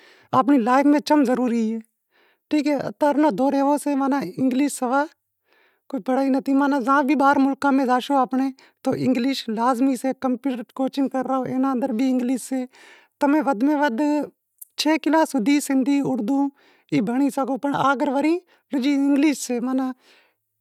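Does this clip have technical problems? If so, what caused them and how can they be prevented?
No, the signal shows no technical faults that need a cause or a remedy.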